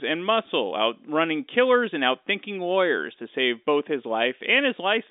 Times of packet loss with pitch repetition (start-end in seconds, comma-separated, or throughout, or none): 0.46